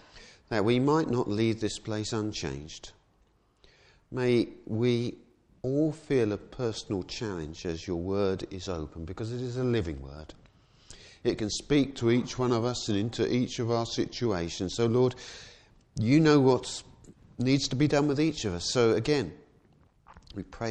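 From 11.91 to 14.25 s the audio drops about 5.2% in speed and roughly 93 cents in pitch, then snaps back: a drift correction step, likely from clock-matching software. Unlike wow, the shift is abrupt and steady.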